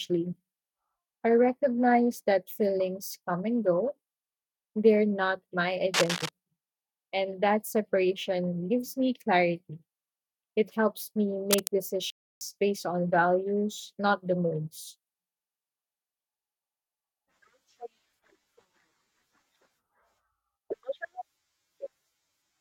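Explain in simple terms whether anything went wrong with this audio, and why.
Cable scratch noise appears twice, from 5.94 to 6.29 s just after "they're not my", and from 11.51 to 11.67 s after "helps me". A brief, rough scratching rides over the speech, likely from a worn cable or connector being moved so its electrical contact flickers.

A playback stall follows at 12.10 s, just before "based on values not". The sound cuts out for about 0.31 s, then resumes. This is likely the player running short of data or being held up, leaving the output silent until it caught up.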